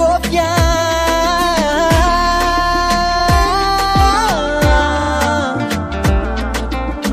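At 3.16 s a 46.4 ms block plays twice, and at 4.97 s one plays three times. These are repeated frames, consistent with a single compressed frame being duplicated. Each causes a short stutter. Waveform and spectrogram show identical slices side by side.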